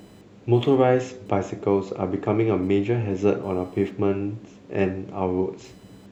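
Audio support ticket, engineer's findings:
Faint buzzing and chirping under the speech, present from start to end. Pulse rate around 1 kHz, roughly 40 dB below the voice. Computer activity noise. Processor, graphics or mouse load shifting the shared audio ground. Tracks machine activity, not the speech.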